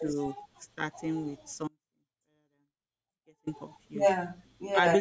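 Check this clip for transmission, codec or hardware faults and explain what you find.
Two faults stand out in the speech.

From 0.58 to 0.69 s, the speech dips by about 15 dB for roughly a tenth of a second. This is likely speech suppressed in double talk. The echo canceller mistook the near talker for loudspeaker echo and turned the voice down.

From 1.68 to 3.47 s, the speech cuts out abruptly for 1.79 s. This is an audio dropout to a faint residue, likely caused by a lost signal on a path that stayed live. The gap holds only faint sound, roughly 30 dB below normal, and the speech snaps back with no fade. The call microphone processing, with nothing above 8 kHz, is working as expected.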